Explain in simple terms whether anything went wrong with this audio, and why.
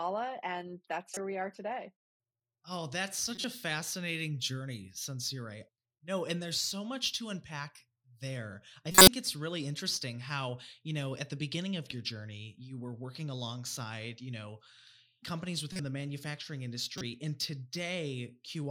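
Corrupt frame decoded at 1.14, 3.35, 8.92, 15.72 and 16.89 seconds: damaged chunks of the compressed speech were played anyway, producing brief chirps or noise bursts. The one at 8.92, right after "there I", is the loudest.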